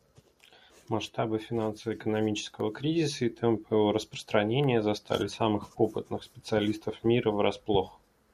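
A speech recording with nothing technically wrong with it.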